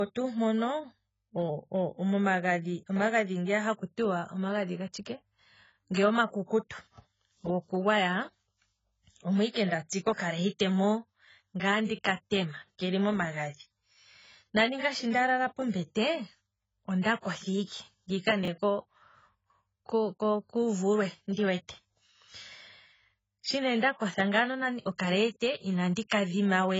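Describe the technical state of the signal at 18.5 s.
Just after "kotha ike ngiika", from 18.43 to 18.48 s, the speech jumps in a brief garbled flick. This is chunks out of order: a block of about 21 ms was played one slot late, after the block that should have followed it. Nothing is missing and nothing repeats. There is no gap of silence as in a dropout and no echo of a repeat, only two short slices swapped, with three hard joins.

Underneath, at this moment as throughout, the sound is dull and muffled, with nothing above 7.7 kHz. The sibilants are smeared and the vowels have a watery, warbling texture. That combination of a low cut-off and warble is most likely heavy AAC compression at a low bitrate, around 16 kbps. A plain low-pass filter would remove the top end but would not smear or warble what remains.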